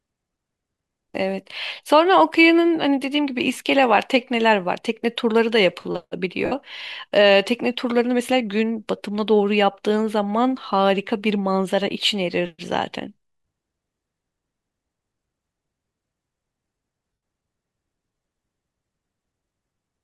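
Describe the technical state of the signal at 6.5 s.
At 6.5 s, Bluetooth LE Audio frames were lost on the link between about 6.45 and 6.52 s, roughly 60 ms of audio, which fits a run of about eight frames. The LC3 decoder covered the gap by replaying the last good spectrum with its phases randomised, turning down the level as the gap stretched on. The speech there becomes a brief hissy smear that sags in loudness before normal sound returns.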